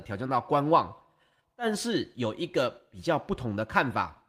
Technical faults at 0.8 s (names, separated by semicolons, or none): none